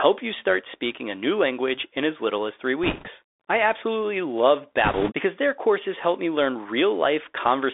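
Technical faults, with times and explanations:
throughout: Bluetooth CVSD headset codec. The speech sounds boxed-in and telephone-like, with a granular hiss beneath it, scratchy s sounds, and roughness on loud, bright passages. Little survives below about 300 Hz or above about 3.6 kHz. This fits a 64 kbit/s CVSD headset link, which sends one bit per sample to say whether the waveform should step up or down. When the sound changes faster than the adaptive step can follow, it distorts.
2.84–3.09 s and 4.85–5.12 s: bit errors on a Bluetooth voice link. Each burst adds a quarter-second of rushing, crackly noise over the speech. The first ends just before "I absolutely love", and the second starts right after it and clears before "because their courses help". There are no sharp clicks, because each CVSD bit moves the waveform by only one small step. The flipped bits, a few percent of them here, blur into a crackle that fades once the errors stop.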